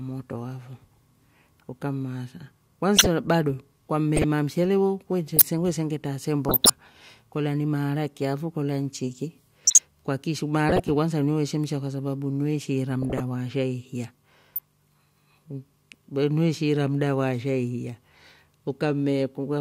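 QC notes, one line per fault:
2.97–3.07, 4.16–4.24, 5.37–5.44, 6.49–6.70, 9.64–9.80, 10.69–10.81, 13.02–13.20, 14.56–14.59 s, corrupt frame decoded: squeaky chirps and noise bursts over the speech, from a few damaged compressed frames each time, played with misread gains and codes.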